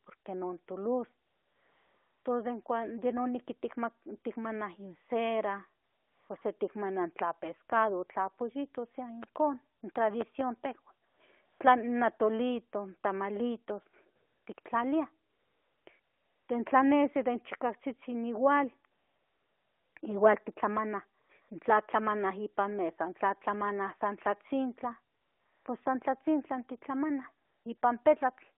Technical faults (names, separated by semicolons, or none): AMR comfort noise; loud pop